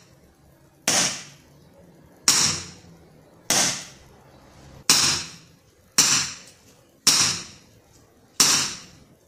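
No technical faults can be heard at any point in the audio; the signal stays continuous and stable throughout.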